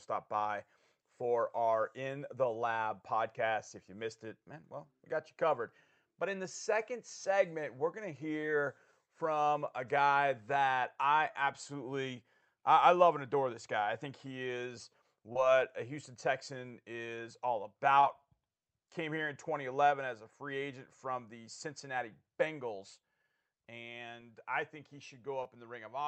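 At 8.41 s after "segment we're going to", 15.33 s, 18.01 s after "is all" and 25.43 s after "and I think he", short concealed packet loss: about 20 ms arrived too late and was extrapolated from the preceding sound. Each leaves a brief smear, seen as smoothed, repeated harmonics or shaped noise on a spectrogram and a suspiciously regular patch in the waveform.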